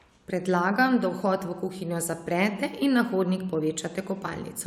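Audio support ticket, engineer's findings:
No audible defects in the speech signal; level, continuity and timing hold steady throughout, with nothing pointing to a faulty component or processing stage.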